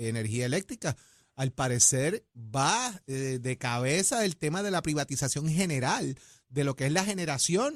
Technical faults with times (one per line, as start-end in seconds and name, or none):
none